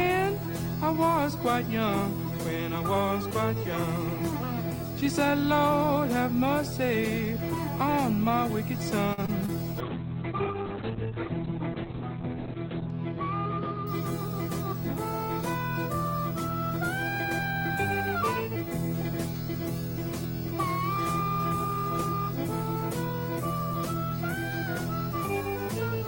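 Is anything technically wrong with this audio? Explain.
Yes, there are a few problems. A video or display buzz runs through the whole clip: a 50 Hz buzz with hash above it and a thin 15.6 kHz whine on top. That's a screen or video cable leaking into the audio path, sitting about 15 dB below the sound.

Around 9.13 to 9.20 s there's a short stall from a late packet. The jitter buffer ran dry, so the receiver held the last sound for about 45 ms until the packet turned up, then carried on. Nothing's lost, but that moment drags with a slight buzz or dip.

Right after, two short concealed packet losses land at 9.26 to 9.30 s and 9.46 to 9.50 s. Each time about 20 ms never arrived, and the decoder patched the gap by extending what came before. You hear them as quick smears or wobbles.

Then from 9.81 to 14.16 s there's a call bitrate drop. The encoder got squeezed from 32 down to 7 kbps, bottoming out for about 2.8 s, and the bandwidth collapses from 20 kHz to 4 kHz, so the sound goes muffled and watery before recovering.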